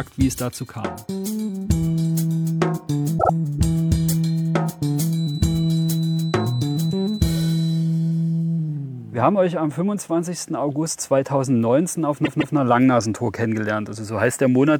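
The audio stutters twice with repeated frames: from 3.18 to 3.30 s a 52 ms block plays twice more, and from 12.24 to 12.55 s a 157 ms block does the same, lengthening the clip. Unlike a dropout, nothing goes missing, and the identical chunks simply repeat. From 5.07 to 7.86 s a thin, steady 4 kHz feedback whistle sits about 20 dB below the sound, swelling and fading slowly in level. Likely a loudspeaker-to-microphone loop held at the edge of feedback, it differs from mains hum by its single high pitch.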